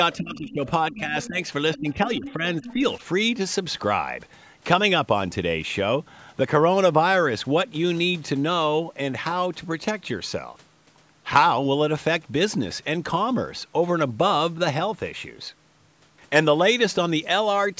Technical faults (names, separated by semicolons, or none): speech suppressed in double talk; other side's voice leaking through